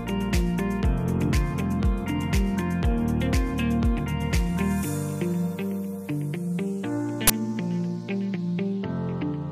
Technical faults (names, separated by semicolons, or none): uninitialised buffer